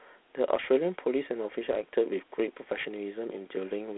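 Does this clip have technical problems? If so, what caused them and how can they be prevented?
Yes. Throughout the speech there is Dialogic VOX ADPCM damage. The sound is confined to a telephone-style band of roughly 250 Hz to 3.5 kHz, with nothing above 3.9 kHz. A plainly audible gritty hiss rides along with the speech. Each sample is coded as a 4-bit step relative to a running prediction, and the coarse steps leave this granular noise. A rate of about 32 kbps points to 8,000 samples a second. To prevent it, record or archive in linear PCM or a modern wideband codec rather than VOX.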